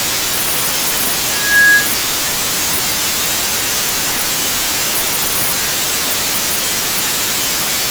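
At 6.64 to 6.72 s, chunks out of order: one 40 ms chunk played a chunk late, jumbling the speech at three hard joins.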